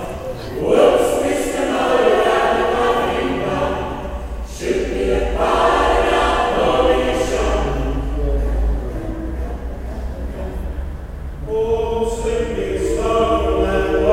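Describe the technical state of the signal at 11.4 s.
The signal at 11.4 s is intact, with no audible fault at that moment.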